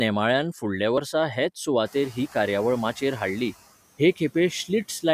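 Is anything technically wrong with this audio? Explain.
Yes. At 0.98 s and again at 2.96 s the speech briefly skips: a short slice, roughly 20 ms, is gone and the audio on either side is butted together with no gap. This is audio missing between chunks. The likely cause is a processor handling the signal in 2-second blocks and dropping a sliver at each handover, which fits the roughly 2-second spacing. Each skip sounds like a tiny jump in the flow.

From 1.85 s to 3.51 s the noise suppressor is catching up. The room noise jumps by about 22 dB at around 2 s, and the suppressor's estimate of the background lags behind. For those first moments the noise passes through with less reduction. Over about 1.68 s the estimate adapts and the suppressor pulls the noise down by about 7 dB, so the noise comes through with less reduction at first and then sinks.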